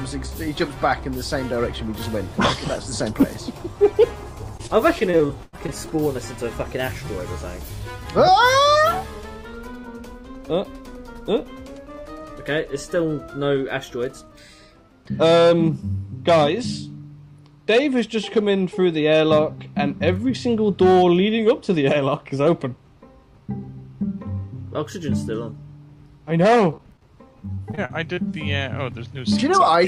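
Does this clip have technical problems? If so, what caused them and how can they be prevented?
Yes. Between 4.57 and 5.70 s, and again at 26.71 to 27.03 s and 27.55 to 28.19 s, the sound turns choppy, with small pieces missing. This is repeated packet loss (robotic sound). Packets arrived late or not at all, and each hole was patched by stretching the last sound, covering about 15 to 20 percent of each span. The longest hole was 96 ms in the first stretch. A steadier connection, with forward error correction or a deeper jitter buffer, would prevent it.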